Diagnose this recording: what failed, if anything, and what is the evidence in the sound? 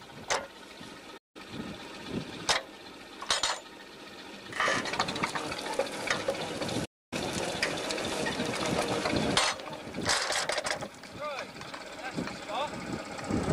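Playback stalls at 1.17 s and 6.85 s. Output goes silent for 172 ms, then 265 ms, before resuming. The player's buffer likely ran dry.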